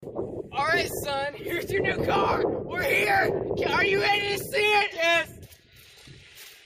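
No technical faults can be heard anywhere in this recording. Nothing in the sound points to a problem in how it was captured, processed or delivered.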